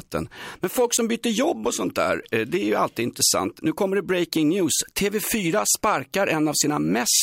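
At 0.97 s in this speech recording, a block of digital silence appears: a 10 ms stretch of samples was replaced outright by zeros. Because the audio drops to silence and returns with no fade, it is heard as a brief tick.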